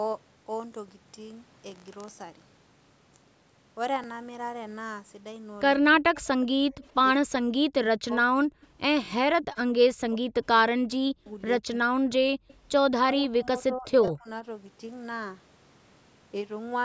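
At 4.04 s there is a click-stutter from overlapping chunks. The audio was handled in 5-second blocks, and each block began slightly before the previous one ended, so about 19.5 ms of sound plays twice at the join. The same defect recurs at 9.06 s and 14.08 s, about 5 s apart. That regular spacing marks it as a block-boundary fault rather than anything in the source.

From 5.8 to 6.28 s the speech sinks by roughly 40 dB, over about 0.4 s in total. This is speech suppressed in double talk, likely caused by the far side talking at the same moment. The echo canceller could not tell the local talker from loudspeaker echo, so it attenuated everything. A much longer stretch follows from 7.13 to 11.95 s, with about 3 s of dropouts reaching roughly 40 dB deep. From 13.01 to 14.28 s, shallower dips of around 25 dB cover about 0.7 s.

Between 6.41 and 6.87 s a faint copy of the speech trails the original by 124 ms, about 30 dB below it. 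This is an echo leak, likely from the far end playing the call over a loudspeaker with an echo canceller that failed to remove everything its microphone caught, so the residue was sent back. A second brief scrap with the same 124 ms delay appears at 12.48 to 12.55 s.

Just before that, from 12.34 to 12.48 s, the room sound ducks by about 38 dB for roughly 150 ms. This is background gated by the echo canceller: it clamped the microphone hard while the loudspeaker was active, leaving a short hole in the ambience before releasing.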